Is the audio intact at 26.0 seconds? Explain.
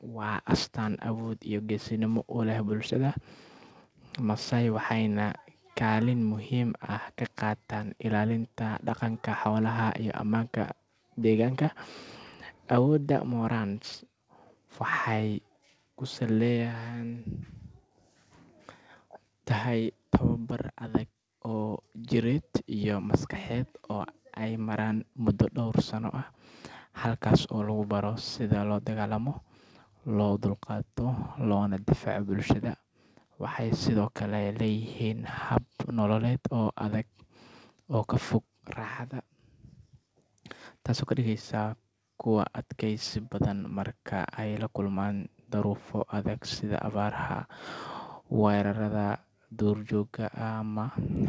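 Yes, the audio at 26.0 seconds is intact, carried through the WebRTC call path with its G.722 coding and nothing above 8 kHz, as is normal for that path.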